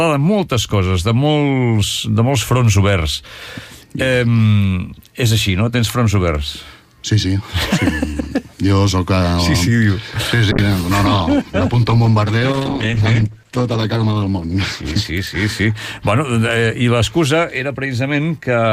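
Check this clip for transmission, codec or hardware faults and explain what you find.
One fault is present.

Call bitrate drop, from 10.52 s to 15.11 s. The connection's bandwidth estimate collapsed, so the encoder was forced to spend far fewer bits on the signal, and the sound fits a fall from around 96 kbps to roughly 11 kbps, held at its lowest for about 4.5 s. Coding that coarsely strips away high-frequency content and detail, so the sound turns muffled, rough and watery through that stretch, then regains its clarity as the bitrate recovers.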